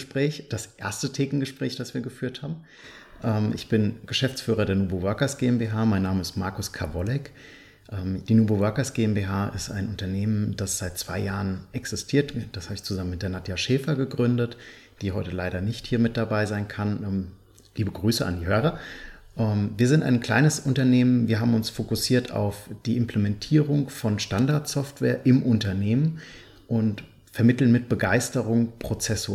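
No technical faults can be heard in the clip, so there is nothing to describe in time order.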